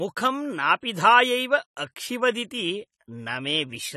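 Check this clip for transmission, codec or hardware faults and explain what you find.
One codec fault runs through the whole clip. For its full length the speech sounds dull and smeared, with fizzy, warbling sibilants and nothing above 13.9 kHz, plainly audible damage that likely comes from AAC compression at a low bitrate, about 32 kbps. Frame-based quantisation strips spectral detail and leaves holes. A plain low-pass filter would cut the top cleanly without the swirling texture inside the band.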